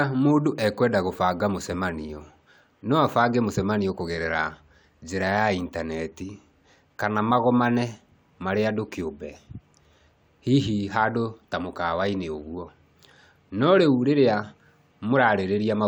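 No technical faults can be heard anywhere in the speech recording.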